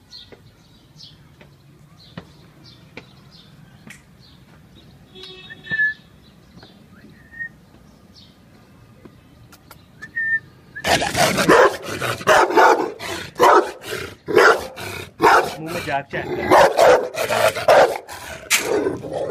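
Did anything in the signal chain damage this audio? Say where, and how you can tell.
No, nothing in the signal chain damaged this audio, so there is no stage to point to.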